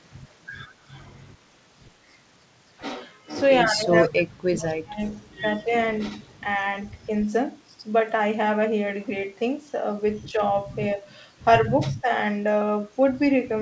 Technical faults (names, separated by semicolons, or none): echo leak; speech suppressed in double talk